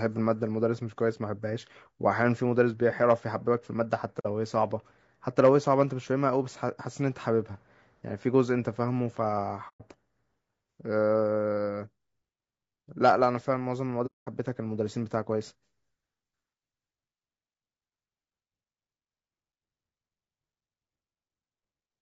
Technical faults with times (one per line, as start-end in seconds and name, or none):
0.00-22.02 low-delay AAC compression
4.19-4.26 AAC frame loss with muting
9.68-9.81 AAC frame loss with muting
14.06-14.28 AAC frame loss with muting